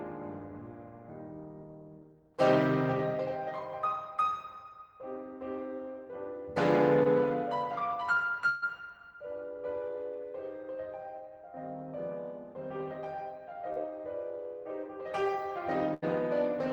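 At 7.03 to 7.07 s the music briefly smears, a quick wobble where the sound seems to hang for an instant before settling. This is short concealed packet loss. About 20 ms of audio never arrived in time, and the receiver papered over the hole with roughly 14 ms of continued sound, extrapolated from what came just before, then blended back into the real signal.

From 8.49 to 8.71 s a burst of packet loss is heard as a held sound that fades rather than moves on, after which the music picks up further along. Around 140 ms went missing in a row. The receiver stretched the last sound across about 131 ms and turned it down as the gap lengthened, adding about 10 ms in the process.

At 13.73 to 13.78 s there is another short concealed packet loss, a brief smear where about 20 ms was lost and about 31 ms of continued sound covered it.

At 15.94 to 16.04 s a second burst of packet loss gives a shorter fading hold before the music resumes with about 80 ms skipped. 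That gap was filled with about 81 ms of extrapolated, fading sound.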